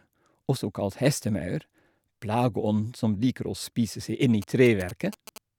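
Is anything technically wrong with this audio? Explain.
Yes. From 4.42 to 5.38 s, GSM signalling bursts break into the speech. A 2G phone close to the recording chain is sending short clusters of radio bursts, which points to it signalling rather than carrying a call. The audio circuitry rectifies that radio energy into sound. The result is a galloping dit-dit-dit of brief buzzes at about 217 Hz. It sits roughly 15 dB below the speech.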